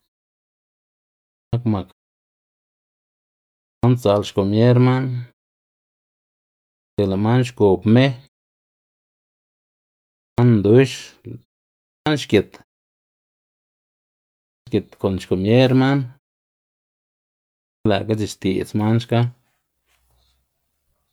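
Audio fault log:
1.15 to 17.52 s, clipped start after a pause: at 1.15, 3.5, 6.65, 10.03, 11.71, 14.32 and 17.52 s, speech resumes abruptly with its opening cut away, losing about 330 to 380 ms each time. The output device drops into sleep during each preceding pause, which ranges from 0.34 to 1.83 s, and has to wake and relock before sound passes again.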